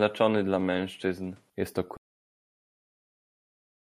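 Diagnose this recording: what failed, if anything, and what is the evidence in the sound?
For the first 1.5 s the speech sounds duller, with nothing above 12.1 kHz and new noise about 40 dB down: likely an input switched to a poorer device.

From 1.97 s to the end the speech stops dead into digital silence with no room tone, an audio dropout to silence, likely a lost input link at the driver.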